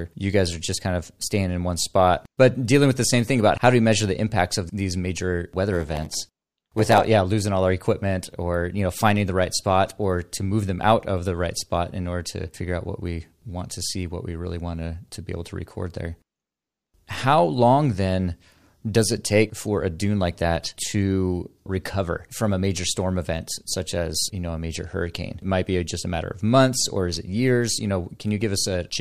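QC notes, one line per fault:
5.71–7.08 s, block size mismatch (padded): after "impacts of these major", each block is short and zero-filled, which fits a 512-sample read size. The gaps buzz at 86.1 Hz. Speech runs at 0.938 speed until "yeah losing all our".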